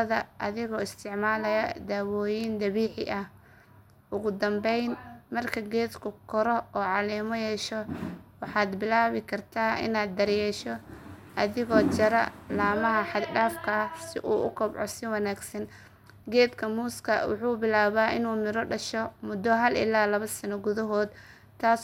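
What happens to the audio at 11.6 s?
Nothing goes wrong at 11.6 s; the speech carries on intact through that moment, with no dropout, click or other fault.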